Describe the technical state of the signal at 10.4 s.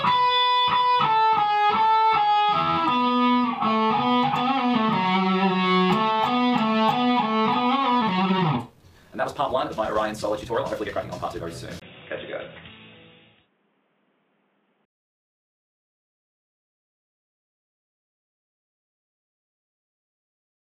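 At 10.4 s the signal sits inside a time-stretched section running from 7.97 to 11.47 s, where the audio plays at twice its normal pace. The pitch is unchanged, so this is likely software compression of timing that drops short pieces to save length. It sounds rushed. On a spectrogram the harmonic bands stay at their usual heights while events crowd together; the waveform shows shortened segments with abrupt splice points.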